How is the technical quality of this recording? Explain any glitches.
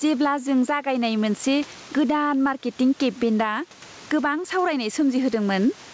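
The recording has one clear fault: gain pumping throughout the speech. The gain swings by about 15 dB. The likely cause is input gain set far too high, with a fast limiter clamping each peak. The result sounds squashed. Faint room noise sits in the background, and the call-codec path passes nothing above 8 kHz.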